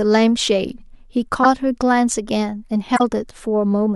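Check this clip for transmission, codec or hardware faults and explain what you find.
Two stretches of corrupt frames were decoded in this speech. At 1.43–1.46 s and 2.96–3.02 s, damaged compressed frames were played anyway, their misread gains and codes placing energy at wrong frequencies across a few frames. Each is a brief noisy squeak, the first louder, the second about 5 dB lower.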